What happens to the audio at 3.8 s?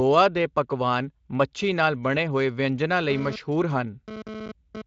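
At 3.8 s a GSM phone buzz is sounding, running from 3.1 s, just after "ਨਾਲ ਬਣੇ ਹੋਏ ਵਿਅੰਜਨਾ", to 4.82 s. A nearby 2G phone's 217 Hz radio bursts are rectified by the audio circuit into a harsh, harmonic-rich rasp about 11 dB below the speech. Unlike smooth 50 or 60 Hz mains hum, it is gritty and cuts in and out with data transfer.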